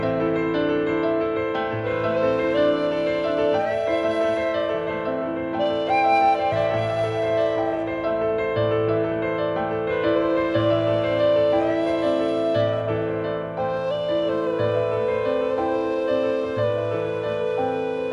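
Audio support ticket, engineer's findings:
Nothing stood out on listening, and no fault was found to log against this clip.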